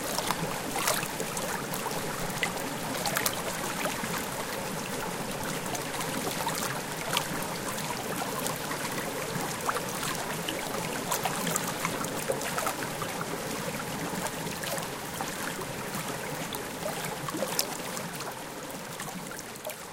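Everyday sounds, with no technical faults audible anywhere.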